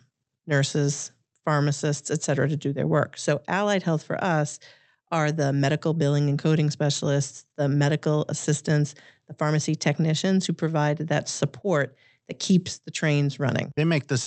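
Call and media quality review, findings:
No faults found in the speech. Call path working as expected: top end stops at about 8 kHz, which points to an Opus call codec limited to that bandwidth.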